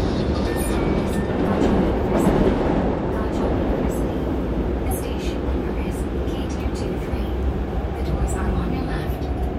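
Sounds here, with compressed frames skipped twice, at 1.47 s and around 4.83 to 4.92 s: each a jump forward of roughly 50 ms.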